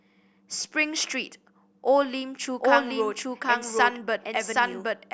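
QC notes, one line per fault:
2.60 s to end, doubled audio track: an equally loud copy trails about 0.7 s behind and starts abruptly, with no decay as echo would have, likely from a duplicate capture path.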